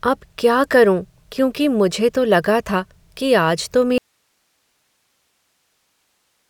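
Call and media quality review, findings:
Audio dropout to a faint residue from 3.98 s to end of clip. Speech cuts off abruptly, leaving only hiss roughly 50 dB below signal level. Not a pause or fade. Likely upstream source lost while capture path stayed live, passing only its noise floor.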